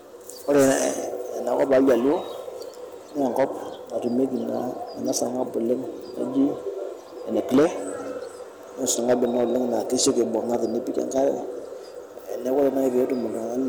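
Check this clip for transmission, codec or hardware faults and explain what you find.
Hard clipping runs through the whole speech clip: the signal is driven about 8 dB past what the stage can pass, so roughly one or two percent of samples hit the ceiling and get flattened. Those squared-off peaks throw harmonics high up the spectrum, which you hear as crackly fuzz on the louder syllables.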